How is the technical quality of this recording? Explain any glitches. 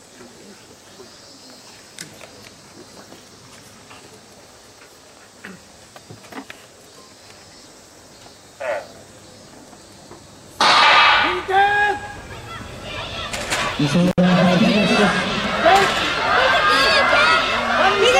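One glitch stands out: an intermittent contact at 14.07 to 14.18 s. A loose cable or plug briefly opens, so the sound drops out for about 66 ms with crackle at both edges and only faint hiss beneath. The waveform shows a sudden near-flat gap bracketed by sharp spikes, and the spectrogram shows thin broadband lines at each edge.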